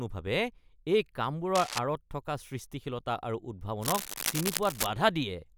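A speech clip with cable scratch noise at 1.55 to 1.79 s and 3.81 to 4.86 s. Harsh rustling bursts sit just below the speech. A worn, moving connector is the likely cause.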